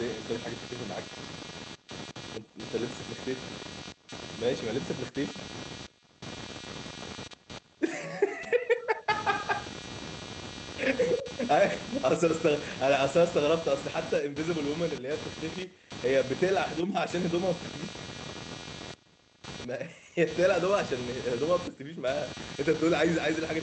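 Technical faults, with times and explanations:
throughout: computer activity noise. A buzzy, scratchy layer pulsing at around 200 Hz, only roughly 10 dB below the speech, swells and fades with the machine's workload, not the talker, as load changes disturb the audio ground. Spectrograms show flickering comb lines unrelated to speech energy.
1.77–2.48 s: jitter buffer speed-up. To drain a packet backlog, the receiver cut pitch-period-sized slices totalling about 50 ms, so the speech runs at 106% speed with unchanged pitch and sounds briefly hurried. The waveform shows squeezed syllables, while spectrogram harmonics keep their spacing.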